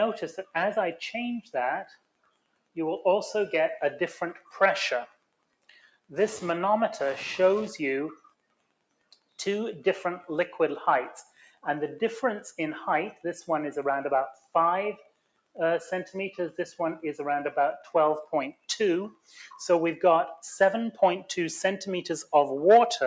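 Wi-Fi interference runs through the whole clip: a nearby radio's beacon, repeating every 102.4 ms, is rectified by the audio circuit and heard as a steady tick about ten times a second, sitting around 30 dB below the signal.

A noise suppressor applied to music or sounds is also active throughout. Tuned for speech, it treats sustained tones and tails as noise, so its gain swings by roughly 10 dB and the sound pumps and thins while attacks pass.

Sound cut by the noise suppressor occurs at 0.40–0.55 s (about 17 dB down), 1.42–2.77 s, 4.37–6.12 s, 8.15–9.39 s, 11.24–11.65 s (about 19 dB), 14.33–16.15 s and 17.78–19.39 s (about 20 dB), the rest reaching about 21 dB. Held or decaying material sinks and tails are truncated, while transients come through. The band stops at 8 kHz, from the call microphone processing.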